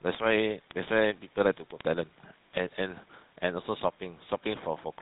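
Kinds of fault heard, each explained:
GSM full-rate codec: The speech runs through the original GSM phone codec, which rebuilds the voice from a vocal-tract filter fed by a sparse, regularly spaced pulse excitation. Nothing survives above 4 kHz. Here the damage is plainly audible as a buzzy, gravelly roughness over the whole clip, and the sound fits a 13 kbps full-rate stream. Unlike a plain low-pass filter, the roughness sits inside the voice itself as well as in the missing top end.
Word clock ticks: From 0.11 s to the end, near 4.99 s, a steady train of sharp ticks of uneven strength runs under the speech, roughly every 30 ms, about 150 in all. This is what happens when a digital link is read by a device running on its own clock rather than the sender's. Each time the two clocks slip past each other, a single sample is dropped or repeated. The rate points to a clock mismatch of roughly 700 ppm. 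The strict regular spacing is what separates it from random clicks or dropouts.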